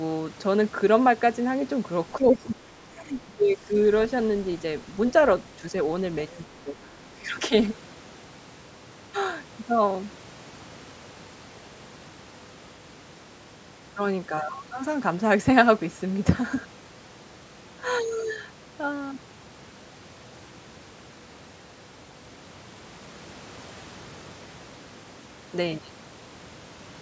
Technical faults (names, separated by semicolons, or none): speech suppressed in double talk; other side's voice leaking through